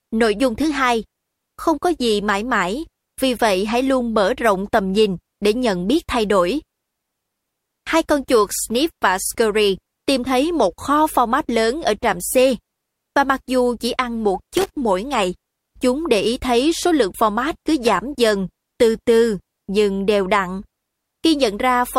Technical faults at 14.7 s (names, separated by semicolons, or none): loose connector crackle